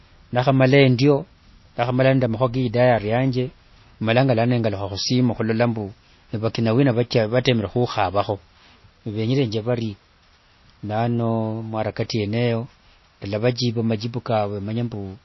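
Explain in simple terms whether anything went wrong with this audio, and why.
The speech sounds dull and muffled from start to finish, with a watery, swirly edge on s sounds and nothing at all above 5.8 kHz. That is plainly audible MP3 compression, likely from too few bits, so the encoder cut the treble and dropped quieter detail.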